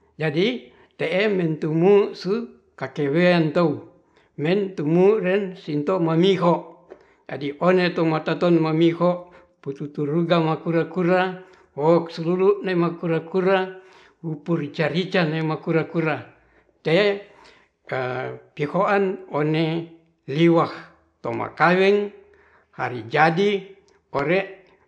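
No technical faults can be heard anywhere in the speech recording.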